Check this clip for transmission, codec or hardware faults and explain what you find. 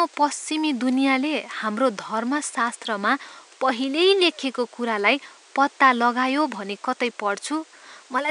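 Nothing stood out on listening to this speech, with only the room's own background noise sitting about 29 dB below it.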